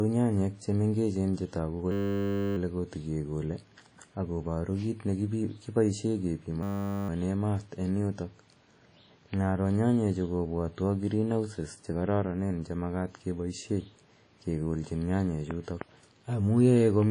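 From the start, the speech sounds washy and ringing, with breathing hiss and nothing above 10.1 kHz. This is likely WMA compression at a low bitrate, around 32 kbps.

At 1.92 to 2.57 s, and again at 6.63 to 7.09 s just after "paru kiit ne kipoishe", a system hang loop repeats one 10 ms slice, giving a steady 100 Hz buzz.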